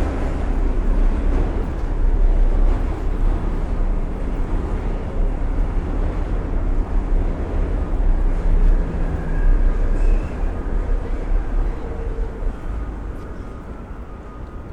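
An everyday-sound recording with two brief bursts of damaged data in a compressed stream, at 3.02 to 3.07 s and 13.15 to 13.20 s. Each 50 ms blip is the decoder misreading corrupt frames and resynchronising, visible as a sharp broadband smear on the spectrogram and a jagged discontinuity in the waveform.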